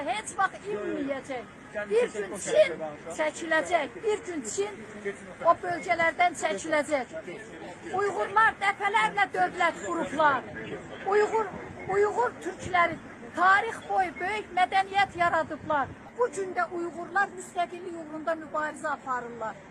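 No technical faults are audible anywhere in this recording.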